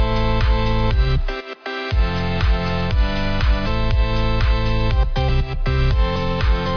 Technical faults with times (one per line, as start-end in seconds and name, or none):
none